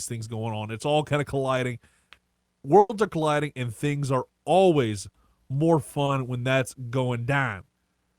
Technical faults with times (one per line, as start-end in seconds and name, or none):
2.79-2.91 burst of packet loss
6.05-6.09 short concealed packet loss